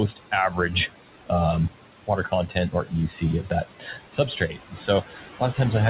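Noise suppressor artifacts run through the whole clip. The room noise, which sits about 13 dB under the speech, gets pulled down by about 16 dB between phrases, so the leftover noise sinks between words and rises under them. Everything also stops at 4 kHz, which points to a narrowband call codec like G.711. From 2.28 to 2.93 s, there's speech cut by the noise suppressor: about a fifth of a second of quieter speech gets mistaken for noise and dropped by up to about 14 dB, so it sounds swallowed. The same happens again from 3.43 to 5.59 s, with about a second in total pushed down by up to about 16 dB, leaving that speech faint.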